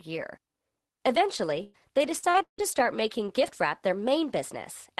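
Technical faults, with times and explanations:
1.63 to 2.6 s, repeated packet loss (robotic sound): the speech turns choppy just before "start making gift wrap". Four holes come in quick succession, the longest about 160 ms. Packets kept arriving late or not at all, and the receiver covered each hole by stretching the last good sound forward. About a third of the stretch, roughly 340 ms, is this filler. It comes through the Opus call path's 12 kHz band limit.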